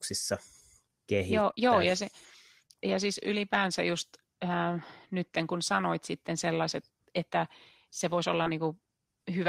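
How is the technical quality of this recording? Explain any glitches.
The recording has four brief dropouts, all short concealed packet loss. They occur at 1.51 to 1.59 s (two consecutive 20 ms gaps), 2.67 to 2.71 s and 8.43 to 8.47 s. Audio arrived too late for the decoder, which bridged each gap by extending the preceding sound and then crossfading back. Each is heard as a quick smear or wobble. On a spectrogram, harmonics briefly stretch flat or turn to hazy noise, and the waveform shows a smoothed, repetitive stretch.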